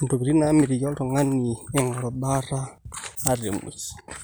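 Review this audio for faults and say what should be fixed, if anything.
Nothing to fix: no faults turned up anywhere in the speech recording, so no corrective or preventive action is needed.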